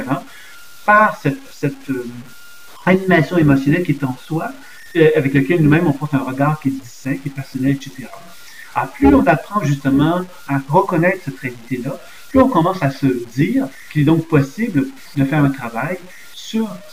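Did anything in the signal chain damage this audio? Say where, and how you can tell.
Yes. The sound is gritty from start to finish. This is likely low bit depth without dither at a sample-format conversion, truncated to 7 bits. Unlike steady dithered hiss, this error, around 30 dB down, moves with the signal.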